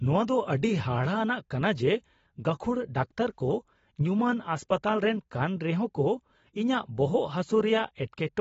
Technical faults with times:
0.00-8.41 AAC compression

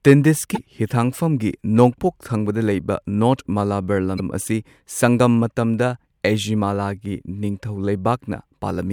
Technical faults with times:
0.54-0.59 broken MP3 bit reservoir
4.17-4.20 broken MP3 bit reservoir

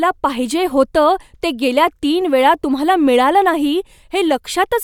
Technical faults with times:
none

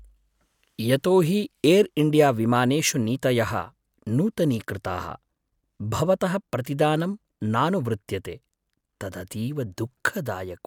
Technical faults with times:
none

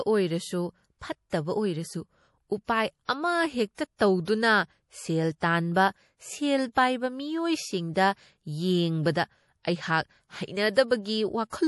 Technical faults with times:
0.00-11.68 MP3 compression
3.75-4.00 pre-echo

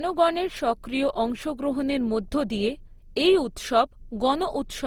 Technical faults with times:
0.00-4.86 generation loss

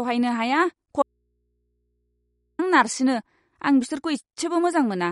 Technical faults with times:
0.00-5.12 MP3 compression
1.02-2.59 audio dropout to a faint residue

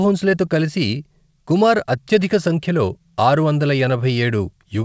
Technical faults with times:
0.00-4.84 clock drift between sender and receiver
0.59-4.38 repeated timing corrections

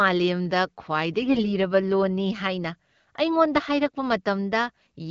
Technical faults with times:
1.22-1.47 AMR bit errors

